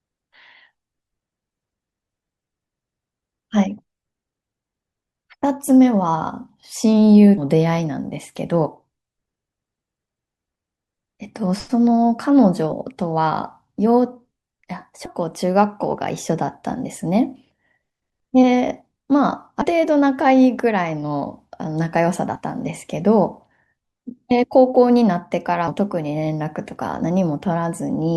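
Speech with compressed frames skipped at 7.37–7.41, 12.71, 15.05–15.10, 19.61–19.67, 22.35–22.40 and 25.67–25.71 s. Roughly 0.07–0.3 s of audio vanishes at each one, in jumps that fit 20 ms codec frames. A spectrogram shows abrupt discontinuities at each join.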